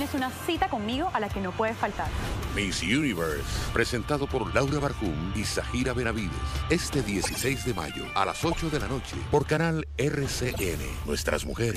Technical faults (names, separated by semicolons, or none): corrupt frame decoded